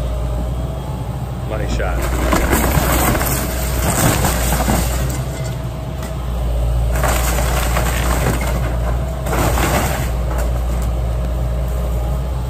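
From 0.26 s to 12.25 s, periodic USB or driver dropouts recur once every second. Each time, about a millisecond of audio is lost to silence as the bus or driver stalls, producing a regular series of small ticks that are audible only while signal is present.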